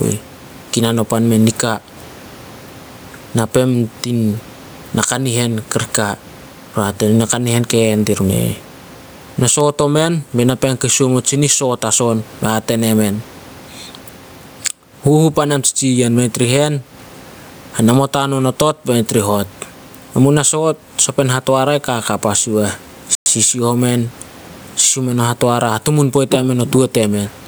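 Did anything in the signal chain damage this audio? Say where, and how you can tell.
Yes. The first problem sits at capture and processing, and its likely cause is input gain set far too high for the microphone, with a fast limiter or compressor clamping down on every loud syllable. The result is gain pumping across the whole clip: the level swings by around 15 dB, leaving the speech squashed and flat in dynamics, with the room noise sitting about 38 dB below the speech.

The second problem is at the playback link. From 23.15 to 23.26 s the audio drops to 110 ms of complete silence, then resumes. That gap points to a Bluetooth stall, likely caused by interference delaying packets until the headphones' buffer emptied. Playback then paused until the retransmitted packets arrived, so the sound cuts out briefly and picks up again.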